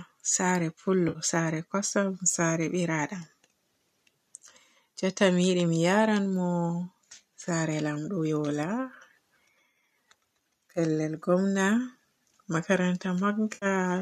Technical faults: AAC frame loss with concealment

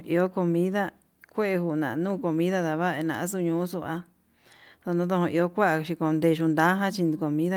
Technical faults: none

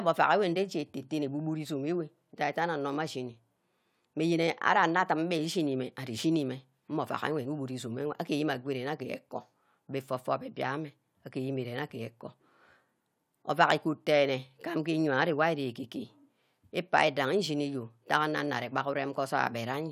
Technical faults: none

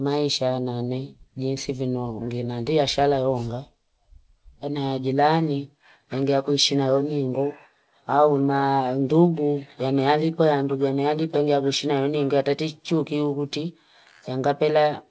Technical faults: none

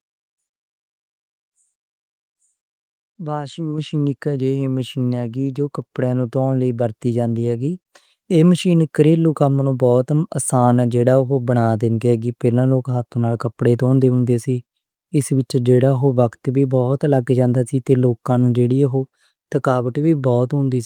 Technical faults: microphone volume stepped up

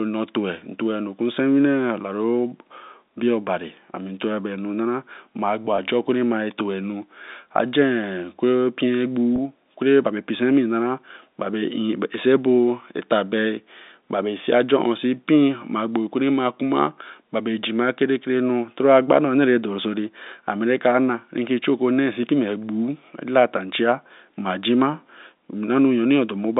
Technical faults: packet loss with pitch repetition

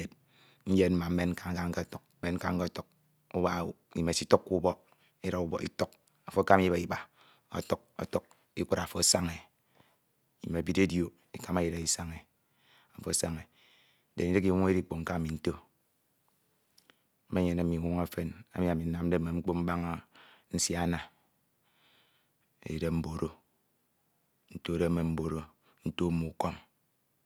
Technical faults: none

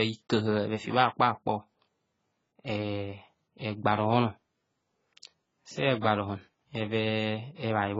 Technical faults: AAC compression; pre-echo

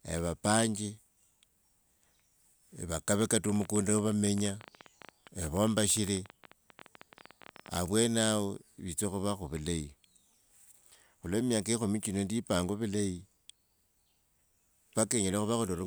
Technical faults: train of clicks

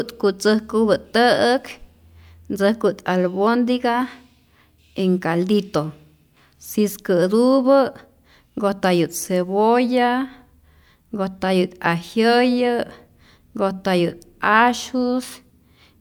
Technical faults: none

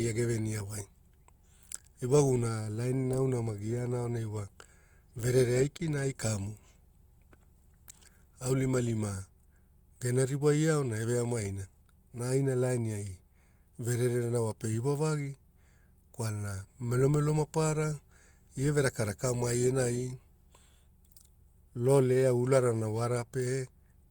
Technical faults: short concealed packet loss

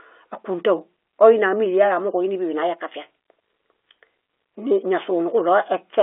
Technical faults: none

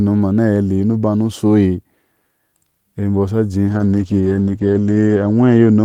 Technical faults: call bitrate drop

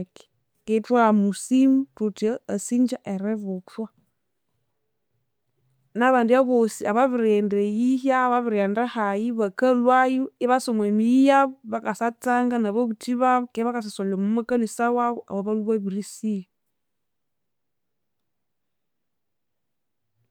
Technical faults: none

